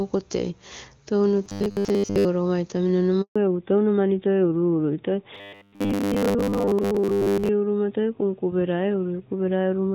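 Speech, starting out clean on HD Voice wideband, then running into trouble. From 1.44 to 2.25 s and again from 5.35 to 7.49 s there's a robotic sound from repeated short buffers: a stiff metallic buzz at 100 Hz that loosely tracks the speech, most likely because audio arrived late and the player looped the last 10 ms or so, skipping most of the real signal. At 3.22 s a handover gap of 140 ms cuts the speech out completely while the call switches networks, and whatever was said there is lost. From 3.36 s to the end the call has fallen back to narrowband. Everything above 4 kHz is gone, so the speech turns duller and rougher, which points to a drop from AMR-WB to AMR narrowband.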